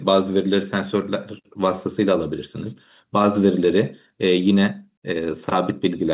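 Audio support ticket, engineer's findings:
Nothing to flag on this speech clip: it came through the call path as you'd expect, with the top of the band stopping around 4 kHz, which fits G.711 mu-law at 64 kbps.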